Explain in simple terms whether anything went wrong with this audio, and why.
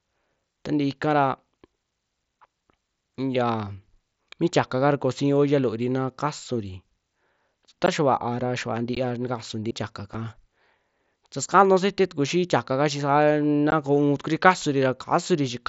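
Unconcealed Bluetooth headset packet loss at 7.86, 8.95, 10.14 and 13.71 s: the speech drops out for a moment, about 15 ms each time (7.5 ms at 10.14 s). Small chunks of sound sent wirelessly from the headset to the phone never arrived, and nothing filled the holes, so the edges are abrupt and can click.

CD skip at 9.71 s: there is a very brief mute, then the speech carries on from a different spot. A bump or a flaw on the disc made the player's laser jump to another turn of the disc's spiral, so it lost its place.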